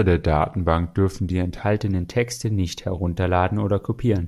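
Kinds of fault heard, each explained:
Wrong sample rate: for the first 1.63 s, speed and pitch drop together to 0.919 times, about 1.47 semitones lower, which fits 48 kHz audio played at 44.1 kHz.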